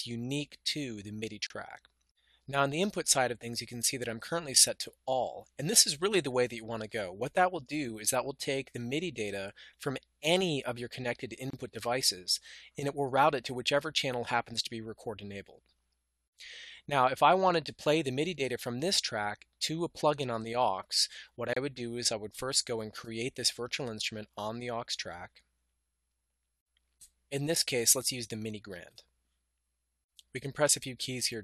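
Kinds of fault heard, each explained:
Gap at a join of encoded pieces: brief silences at 1.47 to 1.50 s, 11.50 to 11.53 s and 21.53 to 21.56 s, about 31 to 37 ms each, recurring every 10 s. The pieces were encoded separately and joined untrimmed, so each encoder's start delay and final-frame padding remain as a dropout with smeared edges before the sound resumes where it stopped.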